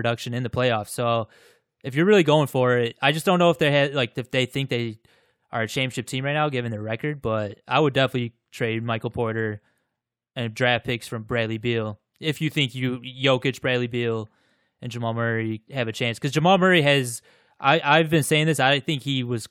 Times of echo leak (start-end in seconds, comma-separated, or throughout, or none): none